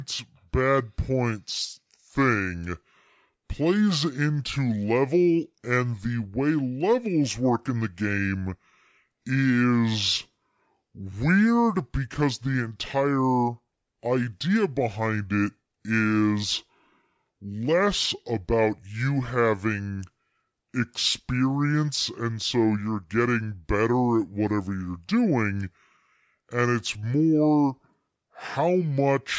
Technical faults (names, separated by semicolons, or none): wrong sample rate